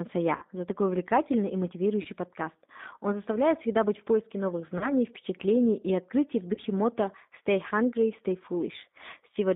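Throughout, the speech carries G.729 codec damage: the line is confined to about 200 Hz to 3.7 kHz, and the 8 kbit/s model rebuilds each frame from a filter, a pitch predictor and a few pulses, leaving the sound plainly rough and synthetic.

VoIP packet loss concealed by the speech codec occurs four times. At 0.36 to 0.45 s, just before "за такой увлекательный и", roughly 60 ms is missing, which fits two lost packets. Single 30 ms gaps follow at 2.02 to 2.08 s, at 4.78 to 4.95 s between "быть в поиске новых" and "впечатлений и открытий в", and at 6.54 to 6.61 s just after "впечатлений и открытий в". Each time the decoder stretches the last pitch and filter into a fading buzzy tone or coloured noise, and the audio stays weak or distorted briefly after packets resume.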